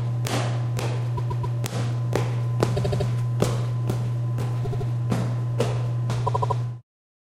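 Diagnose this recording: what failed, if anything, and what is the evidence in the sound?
Repeated frames, at the codec or storage stage: the same short block of compressed audio plays back-to-back four or five times, giving a stutter at 1.16–1.56 s, 2.76–3.07 s, 4.64–4.87 s and 6.26–6.57 s. The first block is about 131 ms, played three extra times. The later ones are about 78 ms, repeated four, three and four extra times, which fits runs of a few codec frames. Each repeat lengthens the audio by that extra playback.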